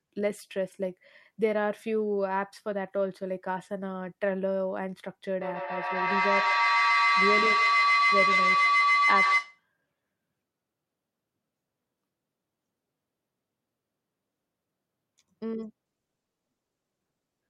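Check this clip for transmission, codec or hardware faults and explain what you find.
Two faults are audible, a feedback howl and a stretch of out-of-order audio.

Feedback howl, 5.41 to 9.66 s: a microphone is picking up a loudspeaker on the same call, and each pass round that loop adds level. The repeats narrow to a tone around 1 kHz, repeating roughly every 150 ms, and peak about 5 dB above the speech.

Chunks out of order, 10.9 to 11.3 s: one 100 ms chunk of audio arrived late and plays three chunks after where it belongs. Nothing is missing, but the sequence is scrambled, so this moment sounds jumbled, with three hard joins.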